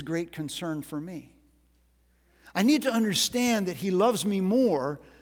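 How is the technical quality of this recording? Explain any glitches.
No technical faults can be heard anywhere in this speech recording; the signal holds steady throughout with nothing that breaks, distorts or drops out.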